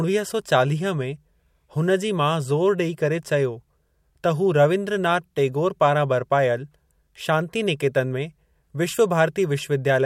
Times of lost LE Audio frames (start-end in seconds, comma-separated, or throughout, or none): none